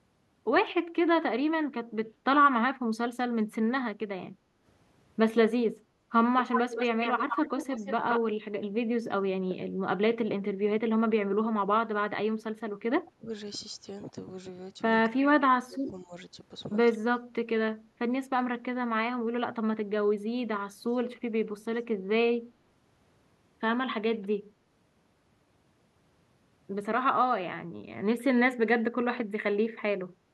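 An echo canceller likely struggled with both sides talking at once and turned the near talker down, so speech suppressed in double talk dips the speech by about 10 dB for a brief moment between 3.69 and 4.65 s. From 6.39 to 8.20 s, an echo canceller likely failed to clear loudspeaker pickup, and this echo leak returns a copy of the speech 169 ms late, only about 5 dB below it. Deeper suppression follows at 12.50–13.30 s (about 20 dB, half a second), then 15.06–16.13 s and 16.95–17.47 s (about 25 dB), chopping the speech.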